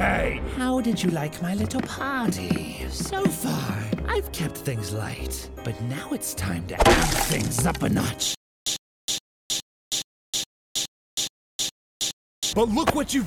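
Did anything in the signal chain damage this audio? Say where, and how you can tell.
Yes. A stutter with silent gaps runs from 8.35 to 12.53 s, likely from a stalled playback stream. The same 101 ms burst repeats ten times every 418 ms, shown as identical blocks separated by flat, empty silence.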